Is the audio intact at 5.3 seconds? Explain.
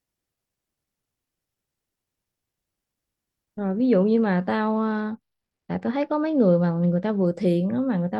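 No. At 5.3 seconds the speech is inside a Bluetooth SBC bit pool drop that runs from 4.71 to 7.26 s. Congestion on the link forced the SBC encoder to spend far fewer bits per frame, consistent with the bit pool falling from 31 to 11, or roughly 83 kbps. The highest sub-bands lose their allocation and the remaining ones are quantised coarsely, so the treble goes dull and a gritty noise sits over the speech until the rate recovers.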